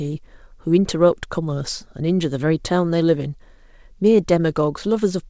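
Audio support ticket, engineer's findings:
No faults found in this speech clip. Audible content stops at 8 kHz, consistent with a wideband call path such as G.722 at 64 kbps, which is working as designed.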